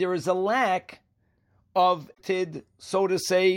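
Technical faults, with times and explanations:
2.10 to 2.21 s, damaged data in a compressed stream: for about a tenth of a second the speech is broken by a short glitch. Some bytes in the compressed stream got corrupted, so the decoder misread those frames, lost its place, and had to hunt forward for the next valid frame header before it could lock back on. What you hear is the disruption while it searched past the broken frames, until clean frames resume just after 2.21 s.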